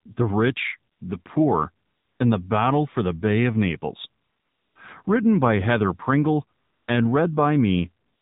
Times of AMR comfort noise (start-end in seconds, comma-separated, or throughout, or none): 0.92-1.26, 1.86-2.20, 4.22-4.76, 6.58-6.88, 8.06-8.21